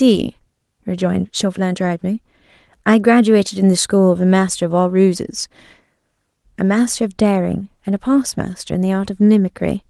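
No technical faults are audible.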